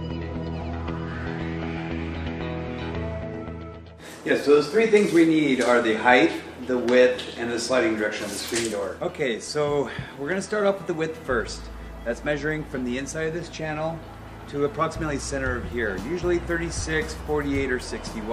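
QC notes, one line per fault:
No faults were heard anywhere in the clip. Nothing here needs attention or correction.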